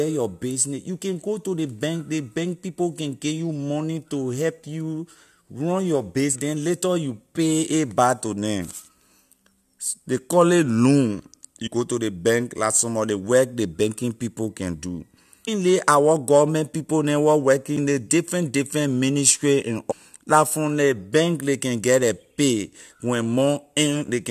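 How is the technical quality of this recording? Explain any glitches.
The recording has five brief glitches from damaged data in a compressed stream, at 6.34–6.36 s (after "help you run your"), 11.66–11.68 s, 15.47 s, 17.77 s and 19.90–19.92 s. Corrupted bytes make the decoder lose frame sync, so each glitch is a brief break in the audio. On a spectrogram each appears as a thin broadband vertical streak, and in the waveform as a jagged discontinuity.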